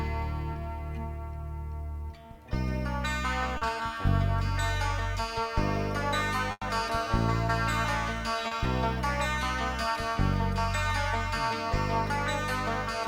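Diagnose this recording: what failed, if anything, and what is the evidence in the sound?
Short concealed packet loss at 0.53–0.57 s, 3.57–3.63 s and 8.47–8.53 s. This is a network fault. About 20 ms, then 40 ms twice, never reached the decoder in time. The receiver extended the preceding sound across each gap and blended back, leaving brief smears or wobbles.

Burst of packet loss at 6.51–6.63 s, also at the network stage. About 100 ms of consecutive audio went missing. Concealment carried the last sound forward while fading it, followed by roughly 30 ms of silence. Playback then resumes further on, with that stretch lost.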